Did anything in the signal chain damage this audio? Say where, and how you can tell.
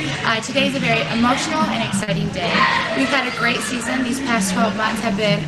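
Yes, at the network stage: a short concealed packet loss between 2.03 and 2.10 s. Roughly 40 ms of audio never arrived in time, and the receiver covered the gap by extending the preceding sound, then crossfaded back, leaving a brief smear or wobble.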